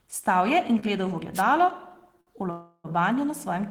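At 0.79 to 0.85 s there is a short stall from a late packet. The last sound is stretched by 29 ms and then resumes, with nothing lost.

At 1.34 to 1.43 s a wireless microphone noise hit breaks through. The radio signal fades and receiver noise rises as a brief swish of static over the speech.

At 2.21 to 2.30 s a second late-packet stall holds the sound for 58 ms before it carries on.

From 2.51 to 2.87 s the call audio freezes. The last sound continues as a fading buzz or hiss for 334 ms, including 40 ms of silence. The speech then picks up where it stopped. The likely cause is packets held up in transit, emptying the jitter buffer.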